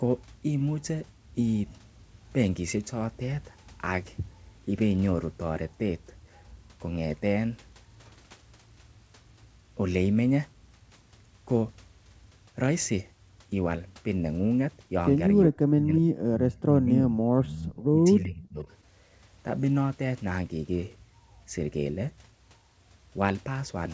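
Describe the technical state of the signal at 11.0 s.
At 11.0 s the speech is intact, with no fault: the sound is band-limited to 8 kHz by the call microphone processing and the G.722 call path, as expected for that route.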